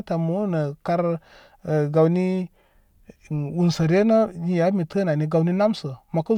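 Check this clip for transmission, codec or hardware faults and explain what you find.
No transmission, codec or hardware faults turn up in this speech clip.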